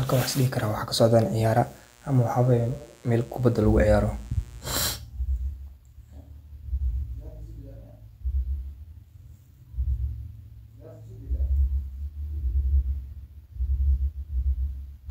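Speech, with a steady, raspy mains buzz from 1.07 to 4.90 s, just after "waxisdehi karah waxa", roughly 30 dB below the voice: sharp switching spikes twice in every 60 Hz cycle, whose harmonics reach into the kilohertz range.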